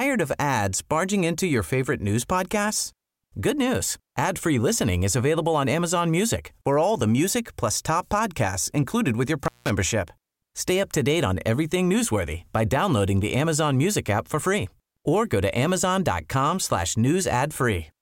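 At 9.44 s, just after "podcasts included with your", an intermittent contact opens the line for about 0.18 s. Speech drops to faint hiss, with crackle at both edges.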